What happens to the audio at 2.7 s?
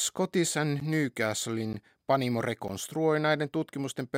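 At 2.68 s the speech drops into a block of digital silence lasting about 12 ms, which fits an unfilled 512-sample buffer; the hard edges give a tick, not a faded dropout.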